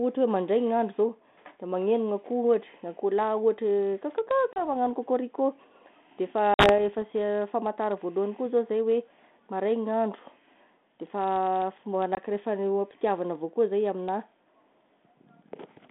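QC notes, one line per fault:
4.54 s, 6.54 s, 12.15 s: packet loss on an ADPCM call. 30, 50, 20 ms silent holes; G.726 predictor desyncs, so sound resumes slightly distorted.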